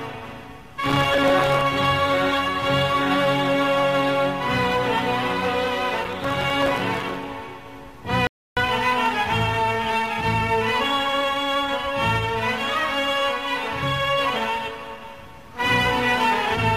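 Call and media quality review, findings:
Processor overload crackle, 0.71–1.62 s: gritty tearing over the sound, dozens of tiny hard-edged silent gaps. Audio processing is missing buffer deadlines repeatedly, and the gap size fits very short buffers of a few milliseconds.

Processor overload crackle, 6.04–7.23 s: same texture, same millisecond-scale gap size, clearing once load eases. Unlike a network dropout, it is many millisecond-scale holes in rapid succession rather than one longer loss.

Rebuffering stall, 8.27–8.57 s: clean silence of about 297 ms, then playback resumes exactly where it stopped, with no content skipped. The player buffer ran dry waiting for data. Unlike crackle, it is one smooth pause that adds time without tearing.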